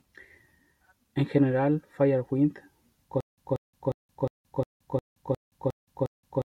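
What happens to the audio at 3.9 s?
At 3.9 s the speech is caught in a stutter with silent gaps that begins at 3.21 s and runs to the end: a 185 ms fragment repeats every 357 ms with 172 ms of digital silence between, likely a stalled stream replaying its last buffer. A waveform shows identical blocks separated by flat gaps.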